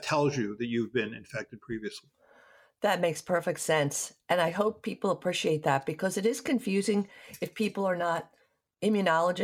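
No technical faults can be heard anywhere in the recording; the signal stays continuous and stable throughout.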